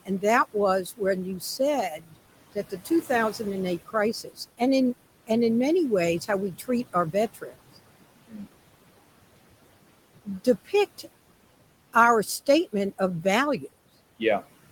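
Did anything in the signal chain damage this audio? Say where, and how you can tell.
Yes. The call-processing noise suppressor pulls the background down by about 18 dB throughout, lowering the noise bands frame by frame, so the background sinks between the words and rises under them.

The same noise suppressor mistook speech for noise and cut it at 0.05–4.61 s (ending before "in and in many"), 6.20–8.48 s (just after those words), 10.25–11.07 s and 11.93–13.62 s. Drops of up to about 18 dB leave quiet sounds swallowed and faint.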